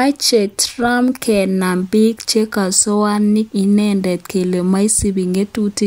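Nothing stood out on listening to this speech recording.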